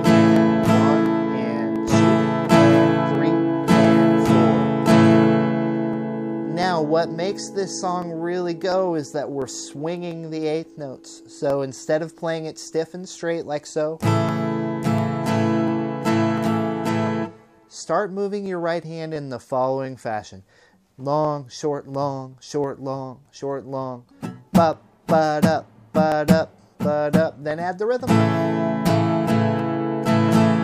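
A regular click or pop recurs every 0.7 s or so, from 0.36 s to 30.29 s, about forty in all. These are likely clock drift buffer slips: two clocks differing by roughly 500 parts per million, so a buffer periodically drops or repeats a dozen-odd samples.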